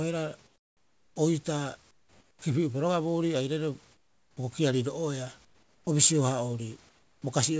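In each pause between phrases, at 0.47 to 1.16 s, 1.91 to 2.42 s, 3.92 to 4.37 s, 5.45 to 5.87 s and 6.89 to 7.22 s, the room background gives way to comfort noise: a steady, featureless hiss about 7 to 13 dB quieter, likely from discontinuous transmission on the call path. Unlike a gate or dropout, these gaps never go silent, and the audio, capped at 8 kHz, fits a G.722 link.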